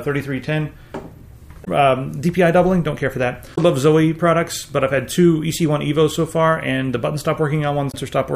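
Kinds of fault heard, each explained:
Damaged data in a compressed stream: Corrupted bytes in the encoded stream leave the decoder misreading frames and hunting for the next valid header. The audio breaks into brief garbled blips, about 70 ms at 1.61 s and 3.52 s, and about 40 ms at 7.90 s.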